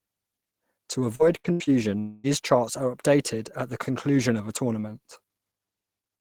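From 1.15 to 1.70 s the speech turns choppy and robotic. This is repeated packet loss, with four short holes, the longest 77 ms, patched by extending the preceding sound. Roughly a third of the stretch is filler, so it stutters rather than going quiet.

From 1.99 to 2.27 s a single continuous smear of held, buzzy sound replaces the speech for about a quarter of a second, most likely a long network dropout. Unlike the brief, recurring holes before it, this is one unbroken gap. It never fades to silence before the audio resumes, minus the lost part.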